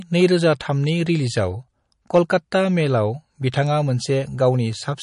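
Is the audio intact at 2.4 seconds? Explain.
No. At 2.4 seconds the speech still carries plainly audible MP3 compression damage, which runs through the whole clip. The treble stops sharply at about 10.5 kHz, and the sound has a watery, swirling quality, likely from encoding at a low bitrate around 40 kbps. Weak frequency components flicker in and out from frame to frame. The fixed treble ceiling and that swirl set it apart from noise or band-limiting alone.

Just before this point, from 2.15 to 2.36 s, there is hard clipping. Peaks driven about 3 dB past the limit are cut flat, which adds high harmonics and a brief crackle. It is an added gritty edge on loud moments rather than missing detail, and it has ended by 2.4 s.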